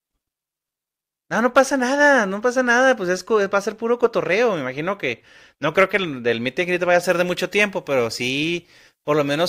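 From 7.03 s to the end of the clip at 9.49 s, the speech turns abruptly thin and hissy: pre-emphasis was left on. The treble lift applied before storage never received its matching de-emphasis cut, leaving about 8 dB more at 10 kHz than at 1 kHz, a shape that fits the CD 50/15 µs curve. Unlike a low-cut filter, the body of the sound stays intact; only sibilants and upper harmonics jump forward, sounding bright and spitty.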